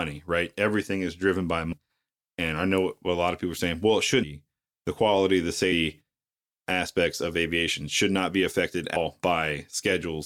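Compressed frames skipped at 1.71–1.73 s after "is driven by", 4.22 s after "are saying well it", and 8.95 s after "aviation should not be": whole frames never play, so the audio jumps ahead about 200, 150 and 200 ms, which fits roughly ten, seven and ten frames of about 26 ms, with an audible join at each.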